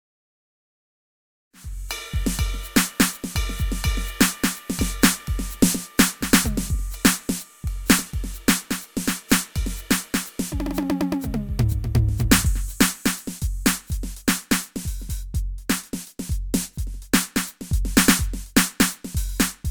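Music clip with no technical faults; the opening is a smooth fade-in that begins around 1.5 s and reaches full level at 1.95 s.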